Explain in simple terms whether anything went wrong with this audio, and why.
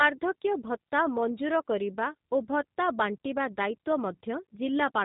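Yes, something went wrong. The whole clip has passed through the G.729 codec, a phone-call format built to squeeze speech into very little data. It does not store the sound itself. It stores a rough recipe for the voice and rebuilds it at the other end. The rebuilt speech stays clear enough to follow. But it sounds slightly rough and synthetic from start to finish. Everything above 4 kHz is gone, so it also sounds muffled.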